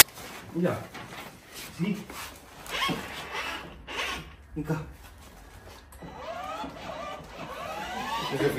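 The clip opens with a fault of the kind known as file tags played as audio: at 0.00 s there is a hard-edged burst of very loud white noise, lasting only about 14 ms, before the actual sound begins. The character of the burst points to compressed data from an embedded cover picture at the head of the file being decoded as sample values. Image data is dense and random-looking, which is why it comes out as very loud static.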